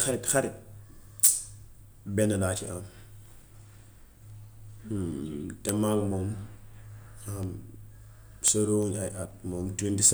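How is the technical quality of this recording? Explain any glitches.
The speech is marred by a steady stream of word clock ticks from 0.12 s to 9.87 s. Around thirty sharp, uneven clicks arrive about every 0.4 s. The receiver's clock drifts roughly 70 parts per million from the sender's, so one sample is repeatedly dropped or doubled. Each slip shows as a one-sample jump in the waveform and a thin vertical broadband line on a spectrogram.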